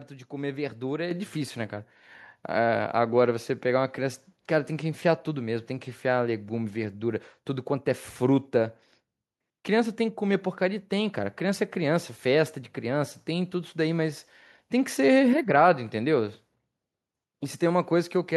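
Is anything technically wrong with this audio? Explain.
Yes, there's one problem. At about 1.11 s the microphone volume steps up: the whole signal jumps by about 7 dB in a single step. What's going on is that the call software decided the input was too quiet and bumped the device's input volume all at once rather than easing it up. Since it happens at the source, the voice and the background noise get louder together, so the room tone lifts right along with the talker.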